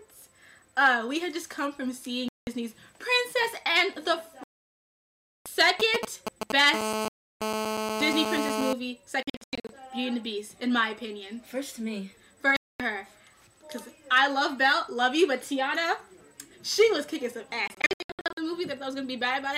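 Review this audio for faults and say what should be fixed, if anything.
Silent gaps appear at 2.28 to 2.47 s, 4.44 to 5.46 s, 7.08 to 7.41 s, 9.23 to 9.69 s, 12.57 to 12.80 s and 17.68 to 18.38 s. These are likely Bluetooth dropouts. Packets missed their deadline at the headphones and were discarded, so the output fell silent. The 4.44 s gap is the longest, about 1.02 s. The 9.23 s and 17.68 s events are scattered holes, not one gap. Their longest runs are about 93 ms and 70 ms. The sound resumes later, as if it had played on. Keep the headphones close to the source, with clear line of sight and less 2.4 GHz congestion.

From 5.80 to 6.76 s there are GSM signalling bursts. A nearby 2G phone sends short groups of radio bursts at about 217 Hz, and the audio circuit rectifies them. The result is a galloping dit-dit-dit of short buzzes. They sit at roughly the same level as the audio. This pattern matches a phone preparing for a call or a message. 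Keep mobile phones well away from the audio equipment, or switch them off.

From 6.76 to 8.73 s the bursts turn into continuous GSM phone buzz. The phone is now in a call and transmits 217 times a second. The rectified pulses form a hard, raspy 217 Hz buzz with many harmonics, unrelated to the audio. The buzz sits about 2 dB below the signal. The dropout at 7.08 s falls inside this stretch. Move phones away and use shielded, well-grounded cabling.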